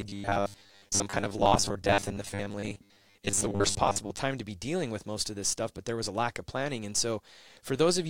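Robotic sound from repeated short buffers runs from 0.01 to 4.19 s. The speech turns into a rigid, metallic buzz locked at 100 Hz, which fits a 10 ms buffer being replayed. New audio likely arrived too seldom, so about half the sound is repeats.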